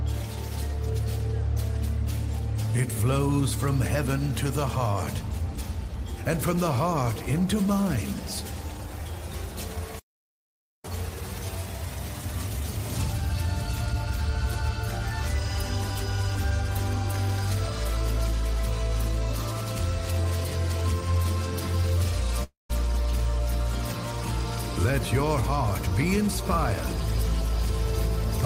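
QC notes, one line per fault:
22.43–22.71 s, long network dropout: the sound smears into a fading buzz and then about 0.16 s of near silence, resuming at 22.71 s with roughly 0.26 s missing. Likely no packets arrived, so the receiver stretched the last audio until it gave out.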